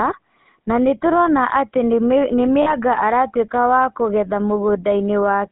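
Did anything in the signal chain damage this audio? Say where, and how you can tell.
Yes. The codec stage shows it throughout. This is GSM full-rate codec damage: the speech has a plainly audible buzzy, gravelly roughness. The encoder models the vocal tract and drives it with a sparse, regularly spaced pulse excitation, which fits the 13 kbps full-rate coder. On a spectrogram, energy stops sharply near 3.7 kHz with nothing below about 200 Hz. Harmonics look smeared and grainy rather than clean, and the waveform looks coarse.

The network or transmission stage produced lost GSM frames between 2.62 and 2.74 s. There the speech stops moving and holds as a short, rough, metallic ring. The decoder concealed the gap by repeating the last good frame's parameters, and the gap points to about 40 ms of lost audio, consistent with two 20 ms frames. On a spectrogram the formants freeze into flat, repeated bands. 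The waveform shows a repeating pattern.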